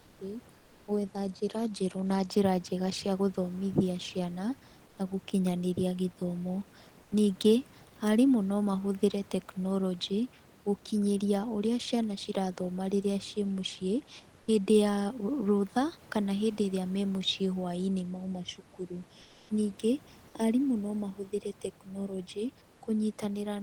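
Comfort noise in place of the background appears at 0.00–0.19 s, 4.87–4.97 s, 7.03–7.11 s just after "gũkinyanĩria gĩthomo", and 14.39–14.47 s between "cirathoma rĩrĩa ciĩ mũciĩ" and "hĩndĩ ya rũtha kana". In each pause the real room noise is swapped for a smoother, featureless noise, about 3 to 4 dB quieter. The likely cause is discontinuous transmission in the Opus codec, with the receiver synthesising filler during the silence.

From 18.05 to 22.38 s, after "ĩrĩa me mũciĩ hwainĩ", channel delay (comb filtering) makes the speech hollow and phasey. A delay of roughly 0.4 ms between channels, summed to mono, cuts evenly spaced notches starting around 1.5 kHz. Within this stretch, at 19.21–19.49 s, another 280 ms gap is filled with comfort noise, only about 1 dB below the surrounding background.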